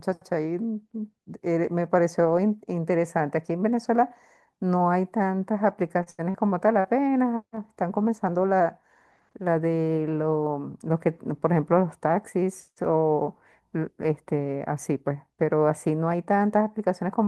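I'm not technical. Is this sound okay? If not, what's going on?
No. Between 6.03 and 6.87 s, repeated packet loss: audio data kept going missing in transit, and stretching the last bit of sound to cover the holes makes the speech choppy and robotic.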